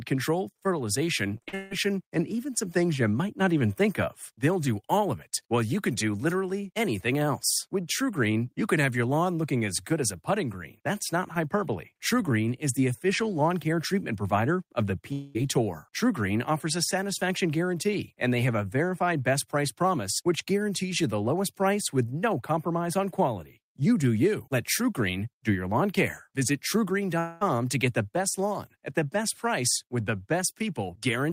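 Right after "control fertilization", from 1.37 to 1.73 s, the speech turns choppy with pieces missing before "and even some things" resumes. This is repeated packet loss: four gaps, the longest 160 ms, were patched by stretching the preceding sound, covering about 72% of that span.

At 15.13 to 15.37 s, after "treatment provider of the", and again at 27.19 to 27.43 s, just before "to get the best", about 0.22 s of speech is replaced by a smeared, fading continuation of the last sound, and the speech then resumes with that portion gone. Both points to a likely long network dropout.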